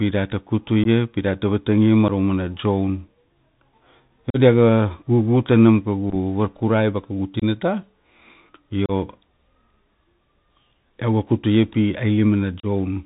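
Right from the start the whole clip sits on a Bluetooth CVSD headset codec, the narrowband link that fits a 64 kbps CVSD headset connection. CVSD sends a single up-or-down bit per sample and adapts its step size, so it chases the waveform rather than describing it. Nothing above 4 kHz gets through, s sounds come out scratchy, loud bright bits smear into distortion where the step can't keep up, and there's a grainy hiss running under the speech the whole way.

On top of that you get unconcealed Bluetooth headset packet loss: short runs of voice packets went missing and got replaced with silence instead of being patched over. It hits at 0.84–0.87 s, 2.08–2.11 s, 4.30–4.37 s (the longest gap, about 41 ms), 6.10–6.16 s, 7.40–7.43 s, 8.86–8.91 s and 12.60–12.66 s. Each one is a sharp-edged hole that can click, with the level dipping briefly as the codec recovers. The 6.1 s one is different. 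It's about 26 ms lost in bits of 7.5 ms or less, spread over roughly 52 ms, so it comes across as a rough, chopped crackle rather than one clean dropout.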